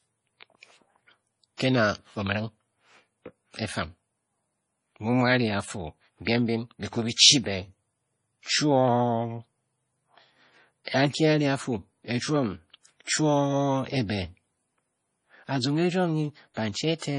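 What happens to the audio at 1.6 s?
Just before 1.6 s, from 1.57 to 1.60 s, a pre-echo smears about 24 ms of short hiss ahead of a sharp speech onset. The codec spread its quantisation noise across the whole transform block, so noise scaled for the loud attack leaks into the quiet moment before it, and the onset sounds soft. On a waveform, low-level fuzz appears before the attack; on a spectrogram, a thin broadband smudge precedes the onset's vertical edge.

Underneath that moment, the whole clip carries heavy MP3 compression damage, likely from a very low bitrate around 32 kbps. The treble is cut off with nothing above about 10.5 kHz, and weak frequency detail flickers in and out between frames, giving a watery, swirly texture and metallic edges on s sounds. A spectrogram shows a hard ceiling at 10.5 kHz and patchy, blocky holes in the upper bands.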